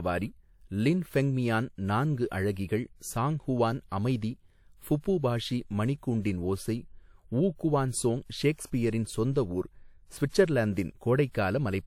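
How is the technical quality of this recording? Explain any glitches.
The recording has one audible glitch, a pre-echo lasting about 41 ms from 5.00 to 5.04 s. A short hiss arrives just ahead of a sharp onset in the speech, and the attack itself sounds softened and smeared. A transform codec spread its quantisation noise across the whole block, so noise scaled for the loud onset leaked into the quiet moment before it. Unlike a reverb tail or a genuine echo, this smear comes before the sound rather than after it.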